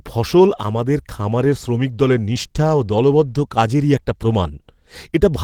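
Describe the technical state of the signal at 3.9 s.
At 3.9 s the audio is intact, with no audible technical fault at that point.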